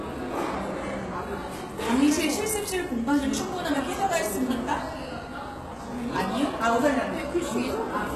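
Throughout, the audio carries heavy HE-AAC compression damage, likely from a very low-bitrate HE-AAC v2 encode around 16 kbps. The treble is rebuilt from copied lower bands rather than coded, so it sounds gritty and metallic, with nothing above 12.3 kHz.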